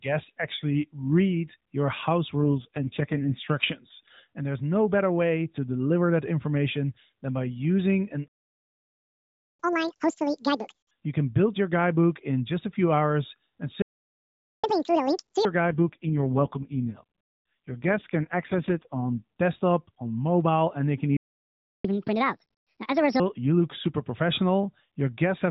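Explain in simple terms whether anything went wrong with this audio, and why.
Several things went wrong. The call runs through a narrowband mobile phone codec, so the speech sounds thin and boxy throughout.

An AMR rate drop happens from 2.43 to 3.50 s and again from 15.66 to 19.23 s, just before "desktop on mobile and". A weak signal forced the phone codec to squeeze the speech into far fewer bits. The voice turns rough and robotic. It recovers once the rate climbs back.

A playback stall silences the speech three times. It happens at 8.28 s for 1.3 s, at 13.82 s for 0.8 s, and at 21.17 s for 0.7 s, right after "mobile and they can". The player likely ran out of data. The sound simply stops mid-flow.

Catch-up at higher speed follows each stall. From 9.60 to 10.91 s and 14.64 to 15.45 s, playback runs at double speed and sounds close to an octave higher. From 21.85 to 23.20 s it runs one and a half times faster, about half an octave higher, before "you look super".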